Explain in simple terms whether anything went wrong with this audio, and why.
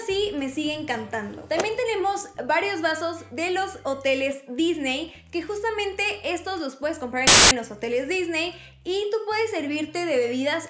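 At 7.27 seconds a harsh burst of static cuts in and stops just as abruptly at 7.51 seconds, about a quarter of a second later. This is file tags played as audio. The player mistook the embedded cover picture for sound and played it. Because the picture is compressed data, it comes out as very loud white noise. A brief dropout or click would be a gap or a tick, not a steady wall of hiss with sharp edges.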